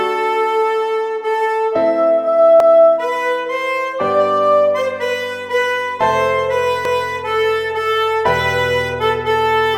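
Overlapping chunks at 2.60 to 2.85 s and 6.85 to 7.10 s: each 4-second chunk begins 250 ms early, so that stretch plays twice, heard as a stutter.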